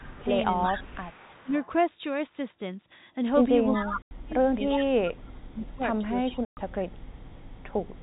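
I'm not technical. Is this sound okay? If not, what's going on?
No, it has three kinds of problem.

Speech suppressed in double talk, from 0.0 to 1.53 s and from 3.77 to 7.35 s: the voice keeps dipping or partly vanishing. Both people were likely talking at once, and the call's echo-removing system turned the real voice down along with the echo.

Echo leak, from 0.03 to 1.66 s, 3.69 to 3.82 s, and 4.81 s to the end: a second copy of the voice follows about 0.37 s behind. The likely cause is a loudspeaker at one end whose microphone picked up the call, and not all of it was removed.

Packet loss filled with silence, at 4.02 to 4.11 s (90 ms) and 6.45 to 6.57 s (120 ms): the sound drops out completely. Pieces of the call's data never arrived, and silence was played in their place. The gaps fit whole 30 ms chunks of audio going missing.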